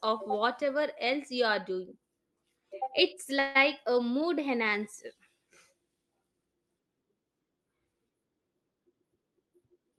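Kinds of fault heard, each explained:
Call audio freeze: From 3.39 to 3.57 s the speech stalls and the last sound is stretched into a fading buzz or hiss lasting about 157 ms. The likely cause is packets held up in transit, leaving the jitter buffer empty so the receiver had to improvise. When the packets arrived, the speech resumed where it had stopped. Nothing was lost, but everything after that point plays 157 ms later than before.
Jitter buffer speed-up: From 9.01 s to the end of the clip, the speech runs at about 109% speed while keeping its pitch, so it sounds hurried. The buffer was holding more audio than its target, so the receiver repeatedly cut out short slices of one or a few pitch periods to reduce the delay. Altogether roughly a tenth of a second was trimmed from the Opus-coded stream.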